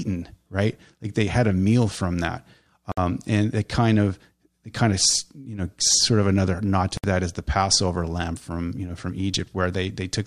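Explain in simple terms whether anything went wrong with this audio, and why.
The speech drops out twice in tiny silent holes: at 2.92 s, right after "a meal from that", for about 57 ms, and at 6.97 s, after "of another nod to", for about 64 ms. It then resumes exactly where it stopped. This is a gap at a join of encoded pieces. The audio was likely compressed in separate 4-second chunks and stitched together, with each chunk's built-in lead-in silence and end padding left in at the seams.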